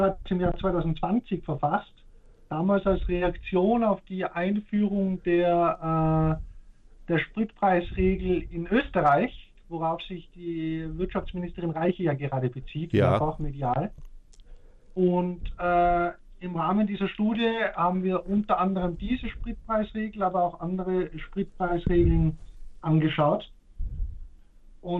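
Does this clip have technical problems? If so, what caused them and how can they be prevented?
Yes. Throughout, the audio sounds dull, with a gurgling, granular distortion and upper frequencies that flicker in and out. This is likely MP2 compression at a low bitrate, which fits roughly 80 kbps: Layer II splits the signal into 32 sub-bands, and when bits run short, whole upper bands are dropped while the rest are coarsely quantised. To prevent this, encode at a higher bitrate or use a more efficient codec.

At 17.34 s there is a brief burst of DAB burbling. Under weak reception, bit errors slipped past error correction into the MP2 data, and the corrupted values produced short noise blips confined to individual sub-bands. This points to a low error rate of around 0.2 percent. To prevent it, improve reception with a better antenna or placement, or record from a stronger multiplex.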